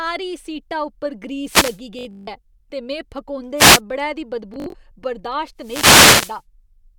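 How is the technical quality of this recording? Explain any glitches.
The recording has two recurring faults: wireless microphone noise hits and Bluetooth stutter.

Wireless microphone noise hits, at 1.43–1.80 s, 3.56–3.81 s and 5.58–6.42 s: the microphone's radio signal faded as reflected paths cancelled, so receiver noise rose over the speech. Each is a swish of static, and the last is almost a second long.

Bluetooth stutter, at 1.99–2.27 s and 4.54–4.75 s: audio packets arrived late or not at all, and the receiver replayed its last short slice until data returned. In the first, about 224 ms goes missing across 284 ms, with one gap of 163 ms. That sounds like a machine-gun buzz just before "ऐ ते". In the second, about 122 ms is lost across 203 ms, and the longest gap is 61 ms. After each stutter the speech resumes further along, so those stretches are simply missing.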